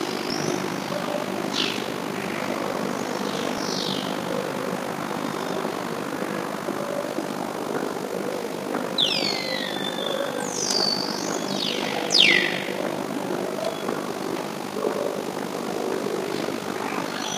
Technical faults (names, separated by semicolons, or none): overlap-add ripple; dropped buffer (overrun)